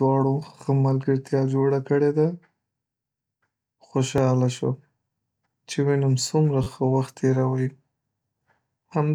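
New audio failed to arrive in time, so the device replayed its last block, a repeated buffer. At 4.18 s one roughly 11 ms piece of speech sounds twice, a click; at 6.64–6.67 s it repeats three extra times, a brief buzz. This fits a 512-sample buffer, with essentially nothing skipped.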